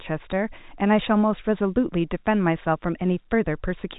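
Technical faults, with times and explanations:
No technical faults can be heard in the speech. It arrives through G.711 telephone coding, so the sound stops at about 3.8 kHz, giving the narrow, fixed-line telephone quality.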